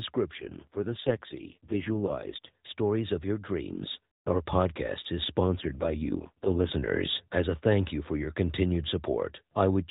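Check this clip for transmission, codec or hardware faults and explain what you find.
Two AMR rate drops occur, from 0.32 to 2.49 s and from 5.46 to 6.75 s. The speech turns rougher and more synthetic, which fits a fall from 12.2 to 4.75 kbps. Unlike packet loss there is no gap, and the 4 kHz narrowband ceiling of the mobile codec stays unchanged.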